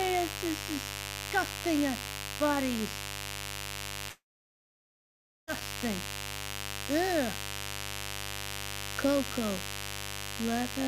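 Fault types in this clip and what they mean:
mains buzz: steady raspy buzz throughout, about 10 dB below the signal, from 50 Hz switching spikes whose harmonics climb into the kilohertz range.
long network dropout: from 4.09 to 5.50 s, likely a network gap, the last sound smears briefly then about 1.3 s of silence, resuming without the lost audio.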